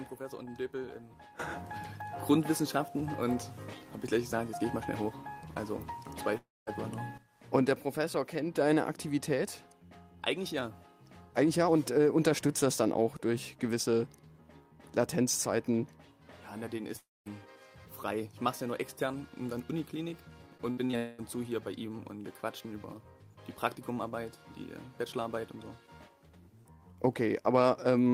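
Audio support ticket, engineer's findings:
Audio stops at 6.37–6.69 s and 16.97–17.28 s: a fading buzz, then about 0.2 s of silence, resuming with roughly 0.3 s lost. Long network dropout, likely jitter buffer starved, concealment decaying to silence.

Choppy, robotic stretch at 20.58–20.95 s with four brief holes, the longest 64 ms, about a third of the span patched. Repeated packet loss, with the receiver's concealment repeating the last sound into each hole.

Immediately after, at 20.97–21.20 s, the sound turns to a fading buzz with no silence, and about 0.22 s never returns. Long network dropout, likely packets not arriving, covered entirely by concealment.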